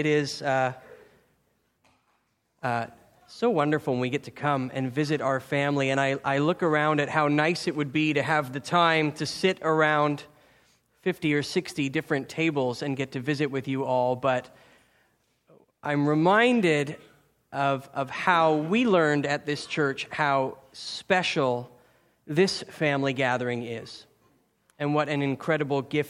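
Nothing here calls for comment, since the whole recording goes by without a single technical fault turning up along the way.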